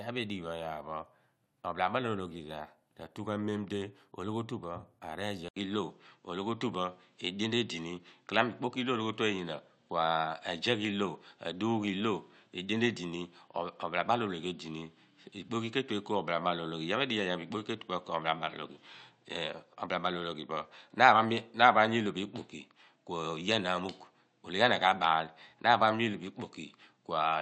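At 5.48 s the speech drops out for 80 ms, then returns duller and boxier, with nothing above 8.2 kHz, a level shift of around 5 dB and a faint new noise floor roughly 50 dB below the speech. That narrower, altered character lasts to the end. The likely cause is the input switched to a poorer device mid-recording, such as another microphone or a headset's call profile, bringing its own bandwidth limit, tone, level and background noise.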